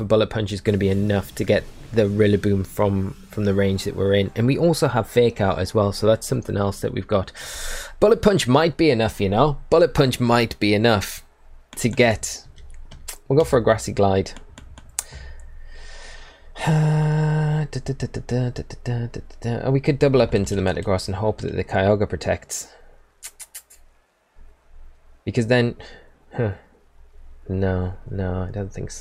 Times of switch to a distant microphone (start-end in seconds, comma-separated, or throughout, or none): none